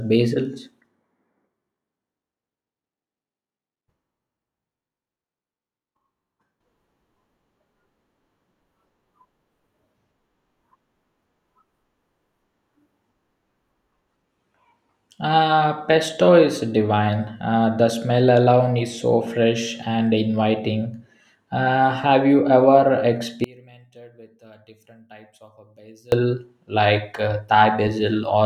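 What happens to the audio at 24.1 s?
From 23.44 to 26.12 s the speech collapses to a faint remnant, about 27 dB down, most likely from one channel inverted cancelling the centred voice in mono.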